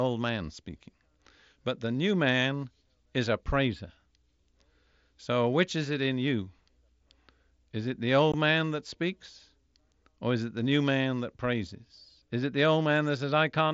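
Speech over a Bluetooth headset, with one hiccup at about 8.32 s: a short burst of unconcealed Bluetooth headset packet loss. Roughly 15 ms of audio just vanishes, which fits a couple of dropped packets, leaving a tiny hard-edged gap, with the wideband mSBC link's light graininess around it.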